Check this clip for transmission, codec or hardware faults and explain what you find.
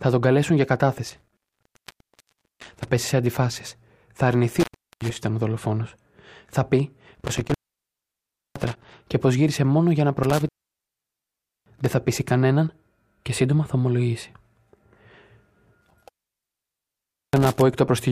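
There's a hardware fault here: an intermittent contact that drops the speech five times, at 1.10–2.89 s, 4.49–5.17 s, 7.15–8.95 s, 10.23–11.91 s and 15.81–17.61 s. A loose plug or cable is briefly opening the signal path, so the speech vanishes for 1.24 s, 0.39 s, 1.01 s, 1.17 s and 1.25 s. Each cut is bracketed by crackle as the contact breaks and remakes, with only faint hiss left while the line is open.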